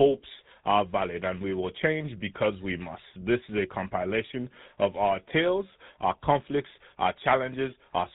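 Throughout the speech, GSM full-rate codec damage is plainly audible: a buzzy, gravelly roughness from regularly spaced pulse excitation and a hard ceiling at 4 kHz, consistent with about 13 kbps. Unlike simple band-limiting, the grit sits inside the voice itself.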